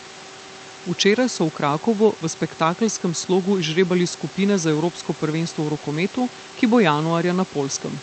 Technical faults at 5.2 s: none

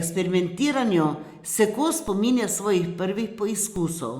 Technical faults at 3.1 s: none

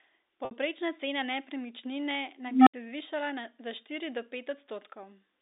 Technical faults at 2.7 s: unstable filter

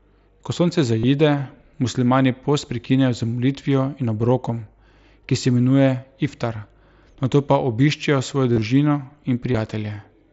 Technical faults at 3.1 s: none

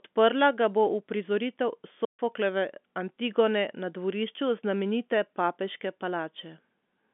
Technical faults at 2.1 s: playback stall

